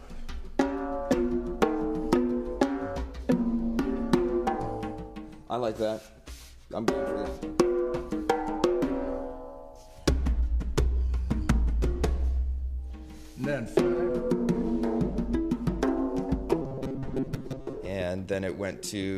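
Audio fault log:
16.62–17.78 s, robotic sound from repeated short buffers: the sound turns into a rigid, metallic buzz with a fixed pitch of 134 Hz. The likely cause is new audio arriving too seldom, so playback keeps looping the last chunk of about 7.5 ms and drops roughly half the real signal. On a spectrogram this shows as evenly spaced harmonics locked to 134 Hz. The waveform shows one short segment copied over and over.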